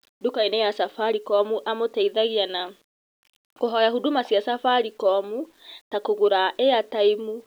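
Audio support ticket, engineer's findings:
Low bit depth without dither, whole clip. Grainy, signal-tracking distortion on speech; quiet tails sputter or cut to silence. Error sits around 40 dB below signal, which fits a 9-bit word length. Likely cause: rounding to coarse steps, no dither. Waveform: visible staircase steps at low levels. Spectrogram: distortion smear following the speech, gaps where quiet sound drops to silence.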